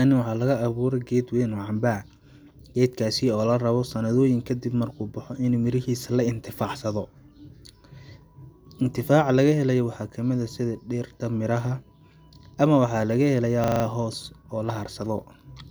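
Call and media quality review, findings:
Steady 25 Hz buzz, 13.64–13.84 s: one 40 ms slice of speech repeated exactly five times. System hang loop; host or audio driver stalled while the sound hardware kept replaying its ring buffer. Speech resumes with essentially nothing lost.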